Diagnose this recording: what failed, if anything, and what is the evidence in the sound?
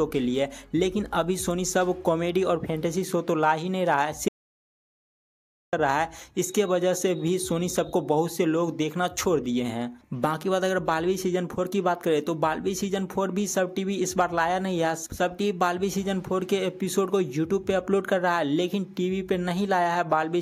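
The input path likely lost its signal, through a dropped device connection or link, while the recorder kept writing silence. This audio dropout to silence runs from 4.28 to 5.73 s. The sound cuts off mid-flow and returns abruptly, leaving about 1.45 s of silence with no room tone. Whatever occurred in that gap is gone.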